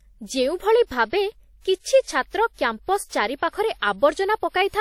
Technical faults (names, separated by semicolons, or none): WMA compression